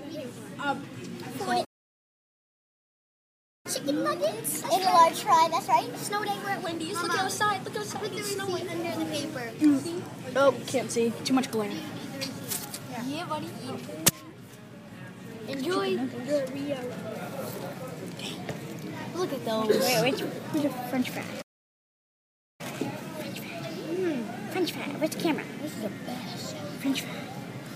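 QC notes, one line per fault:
1.64–3.66 s, playback stall: the sound cuts out mid-flow and stays silent for 2.0 s before resuming, most likely because the player ran dry of data or its thread was blocked; unlike a dropout or gap, the silence is long.
3.66–6.66 s, catch-up at higher speed: straight after the stall the sound runs at 1.15 times normal speed with pitch raised about two semitones, as the backlog is resampled to win back lost time, then settles; speed and pitch rise together, not pitch alone.
21.41–22.61 s, playback stall: a second silent hole of about 1.17 s interrupts the sound mid-flow, likely the same starvation or blocked playback thread; it is a clean halt with resumption afterwards rather than a click or a short packet-loss gap.
22.61–25.61 s, catch-up at higher speed: the sound then plays at 1.1 times speed, pitched up about one and a half semitones, for three seconds while the buffered backlog is drained, before dropping back to normal; the lift in tempo distinguishes it from a plain pitch shift.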